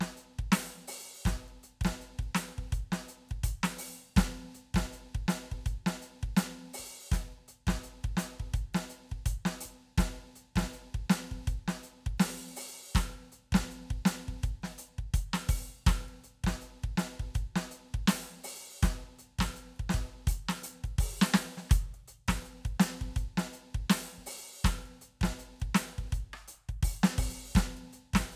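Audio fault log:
The music shows no audible technical faults in the signal path.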